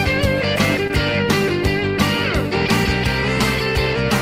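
A short concealed packet loss occurs between 0.87 and 0.91 s: about 20 ms of the stream failed to reach the decoder in time, and the receiver synthesised a 20 ms substitute by extending the preceding sound, following its pitch where it had one or shaping noise where it did not, before crossfading back to the real signal. In the audio this leaves a brief smeared or wobbling patch.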